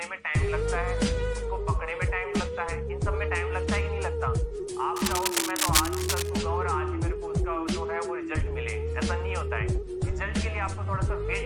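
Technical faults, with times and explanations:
4.94–6.29 s: cable scratch noise. A worn cable or connector was likely moved, its contact resistance jumping erratically, laying dense, uneven scratching about as loud as the sound itself.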